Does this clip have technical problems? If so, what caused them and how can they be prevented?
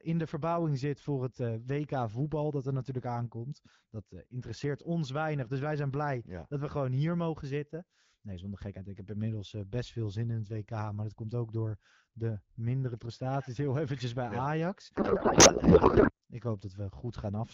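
Yes. From 14.95 to 16.11 s the speech collapses into garbled noise and warble that barely follows it. This is a codec payload misread: the AMR frames were packed octet-aligned but decoded as bandwidth-efficient, so every field is read from the wrong bits. Packet loss leaves short gaps or smeared repeats of the last sound, but here the decoder keeps producing full-length nonsense for the whole stretch. To prevent it, have both ends negotiate and honour the same AMR payload format, the octet-align setting, during call setup.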